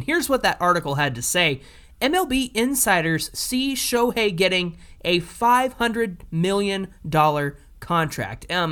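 At 3.97 s, between "insiders see" and "getting a", a tiny forward jump, likely a dropped buffer (overrun), skipping a few milliseconds with no silent gap.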